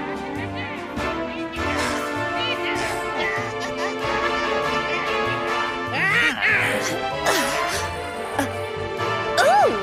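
Nothing technical stands out here; the audio runs along without any dropout, glitch or interruption worth pointing to.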